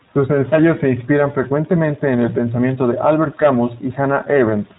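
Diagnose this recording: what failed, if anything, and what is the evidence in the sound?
The codec stage shows iLBC codec damage across the whole clip. The speech is band-limited to 4 kHz and has a rough, slightly synthetic texture. On a spectrogram this appears as a hard ceiling at 4 kHz with smeared harmonics, which fits a 15.2 kbps iLBC stream coding each frame independently.

At the network stage, lost iLBC frames occur from 0.51 to 0.54 s, just before "se inspiran frecuentemente en". That 30 ms gap suggests a single dropped 20 ms frame. The decoder filled it by repeating the last pitch cycle with noise, giving a brief buzzy held sound. The waveform shows copied periods, and the spectrogram shows flattened harmonics before normal speech resumes immediately.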